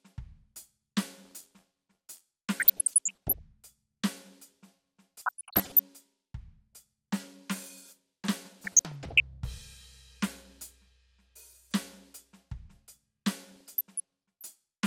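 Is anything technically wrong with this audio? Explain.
Yes. The music has two kinds of fault: one stretch of buffer tearing and four bursts of DAB burbling.

Buffer tearing runs from 1.24 to 2.22 s. The playback writer and the hardware reader have drifted out of step, so they cross inside each buffer period. A small slice of every buffer repeats audio from a few tens of milliseconds earlier, with hard joins at both edges. The result is a steady robotic buzz at 86.1 Hz, which fits a 512-sample buffer.

DAB burbling appears at 2.60 to 3.39 s, 5.19 to 5.79 s, 8.60 to 9.20 s and 13.52 to 14.50 s. Weak reception lets a bit error rate of well under one percent slip past error correction into the MP2 data. Corrupted samples put short blips of noise in single sub-bands, and corrupted scale factors make sub-bands jump in level for up to a frame. It is heard as burbling blips and level jumps over the music.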